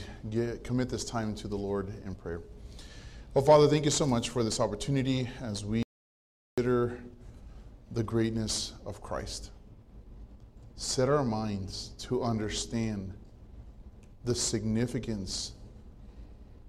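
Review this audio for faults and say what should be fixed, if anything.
At 5.83 s the sound cuts out abruptly and returns at 6.58 s, leaving about 0.75 s of silence with no room tone. This is an audio dropout to silence, likely a lost input connection or accidental mute while recording continued. Secure cabling and monitor input levels during capture.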